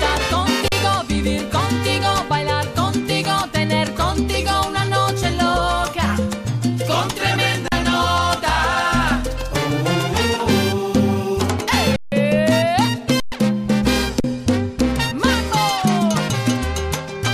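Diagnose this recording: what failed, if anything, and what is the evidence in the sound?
Underrun with held sample at the driver/buffer stage: dropouts at 0.68–0.72, 7.68–7.72, 11.96–12.12, 13.2–13.32 and 14.2–14.24 s (40–160 ms). The converter froze its last value, so the waveform goes flat and the spectrogram shows blank bands. Audio was skipped during each gap.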